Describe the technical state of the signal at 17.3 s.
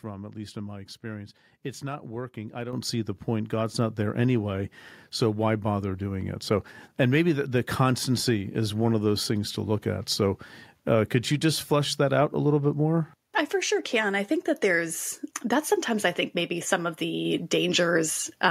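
At 17.25 s the microphone volume is stepped up by about 3 dB in a single jump, as the call software raises the input level. Speech and background noise rise together and stay louder, which separates it from a speaker simply talking louder or a gradual gain ramp.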